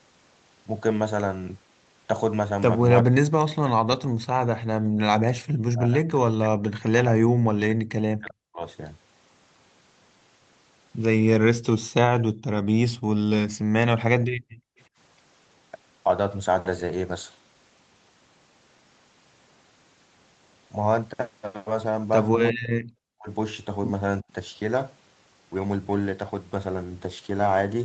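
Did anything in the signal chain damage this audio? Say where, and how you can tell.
Yes, in the call processing, specifically the echo canceller. The speech sinks, by roughly 40 dB at worst, or breaks up at 3.01–4.57, 5.35–8.63, 22.3–23.29 and 24.22–24.27 s. That's likely speech suppressed in double talk: the canceller couldn't separate the near talker from loudspeaker echo and ducked both.

The same canceller also gates the background at 4.81–4.99, 12.32–12.43, 12.97–13.68 and 14.21–14.78 s. The room sound drops by about 37–38 dB for short stretches, then comes straight back once the canceller releases its hard suppression during far-end playback.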